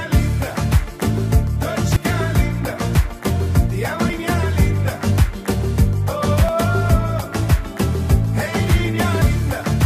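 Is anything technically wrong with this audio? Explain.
Yes. At 1.96, 4.10, 6.49 and 9.22 s the sound jumps abruptly, most likely from a dropped buffer (overrun): the software failed to collect incoming samples before the hardware overwrote them, so a block of audio was lost and the surrounding material was spliced straight together. No gap of silence is left. The sound simply skips forward, by around 150 ms at the first two points and around 100 ms at the last two.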